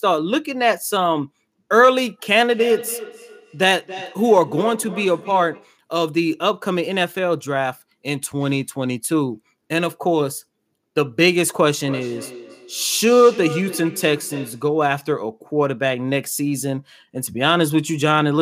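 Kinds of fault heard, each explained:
Feedback echo between two devices: at 2.36–5.79 s and 11.79–14.74 s, a nearby device replays the speech into this microphone, returning roughly every 300 ms, up to about 13 dB down.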